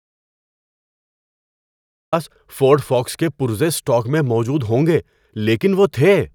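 From the start until 2.13 s, an audio dropout to silence: a flat waveform and an empty spectrogram, likely a lost input, before speech abruptly enters mid-flow.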